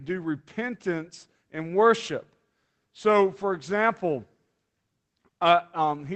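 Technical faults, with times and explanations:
No technical faults; the speech came through a WebRTC call path, and the top end stopping near 8 kHz points to an Opus link at around 24 kbps working as intended.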